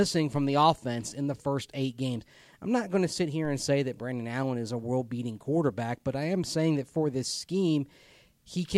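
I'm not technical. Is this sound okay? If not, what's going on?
No. There is a DC step at 0.36 s, just before "the offense in the", and another at 3.45 s, between "not going to sit" and "and say that". At each point the resting level the recording sits on suddenly shifts, as if the baseline were bumped. You hear that jump as a brief low thump or click, while the speech carries on unaffected. Each shift then fades away gradually instead of snapping back.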